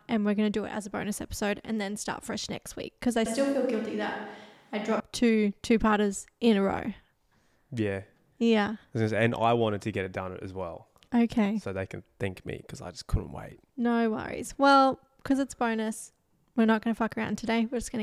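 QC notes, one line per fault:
3.26–5.00 s, switch to a distant microphone: after "next week because I", the speech turns suddenly roomy and hollow, thinner in the bass, about 5 dB quieter, with faint room noise. It snaps back before "two two parters in". A far microphone likely replaced the close one.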